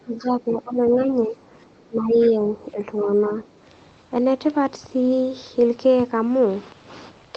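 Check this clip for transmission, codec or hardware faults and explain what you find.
Two echo-cancellation faults show up, both in roughly the first 3.1 seconds of the call.

Speech suppressed in double talk: with both sides talking, the echo canceller likely mistook the talker for loudspeaker echo and attenuated everything. The speech dips by roughly 15 dB from 0.0 to 0.82 s, about 5 dB at 1.06 to 1.36 s, about 10 dB at 1.89 to 2.86 s, and briefly about 5 dB at 3.04 to 3.10 s.

Other side's voice leaking through: the far-end voice, played on the talker's loudspeaker, was likely not fully cancelled from the microphone. At 2.2 to 2.31 s a short scrap of that second voice comes through, roughly 25 dB below the speech, faint.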